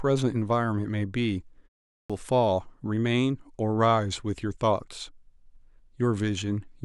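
A clipped start after a pause appears at 1.93 s. Following a short silence of about 0.33 s, the output path had apparently idled and needed time to wake before passing audio again, so the first 166 ms of the returning speech, up to 2.10 s, never reached the output. The next word therefore bursts in abruptly, its opening sounds missing, while the brief pause itself falls cleanly silent.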